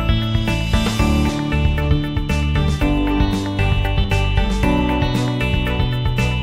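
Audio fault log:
4.04 s, audio missing between chunks: about 300 ms is skipped, the sides joining with no gap. Likely lost while switching 3-second chunks.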